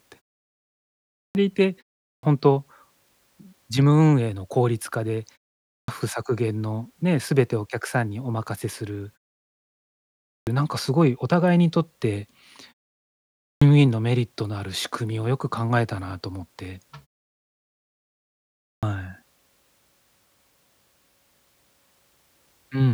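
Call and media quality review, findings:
Clipped start after a pause at 1.16, 2.04, 5.7, 10.27, 13.43, 18.65 s: output device sleeps in silence, wakes late, swallowing roughly 180–200 ms of speech onset.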